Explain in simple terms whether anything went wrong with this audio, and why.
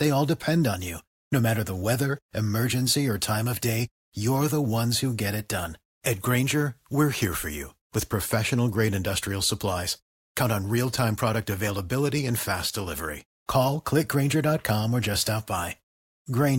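Nothing went wrong with this speech recording that a listener could pick out. At no point does anything in the sound stand out as a problem, so there is nothing here that needs explaining.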